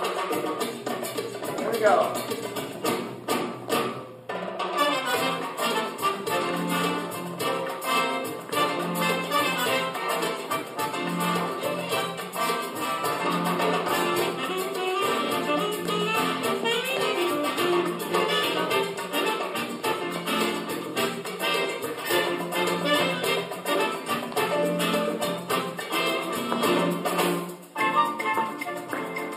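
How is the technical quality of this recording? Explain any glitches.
The recording has one technical fault, present for its whole length: channel delay (comb filtering). One channel arrives a tiny fraction of a millisecond late, roughly four samples, and when the two are summed to mono the shared content cancels at regular intervals. The first deep notch falls at around 7 kHz, taking the sparkle out of the upper range and leaving the sound slightly hollow and dull. Unlike a simple low-pass roll-off, the energy dips at a fixed point and partly recovers above it.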